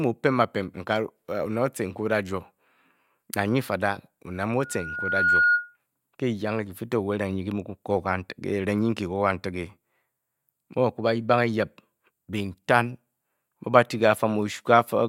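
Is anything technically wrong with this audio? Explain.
Yes. From 4.59 to 5.77 s, just after "fada oned mu", there is loudspeaker feedback squeal: the microphone picks up its own loudspeaker, and at 1.4 kHz the loop gain exceeds one. A single tone swells over roughly three-quarters of a second until it sits about 5 dB above the speech.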